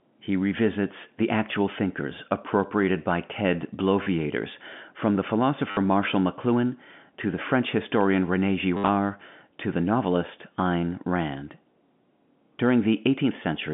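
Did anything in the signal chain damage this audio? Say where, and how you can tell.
Yes, network packet loss with last packet repeated: robotic stutters at 4.03–4.06, 5.71–5.77 after "from the", and 8.77–8.89 s, where the repeated audio fits 10 ms packets.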